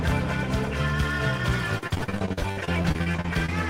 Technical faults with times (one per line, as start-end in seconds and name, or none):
1.78-3.49 repeated packet loss (robotic sound)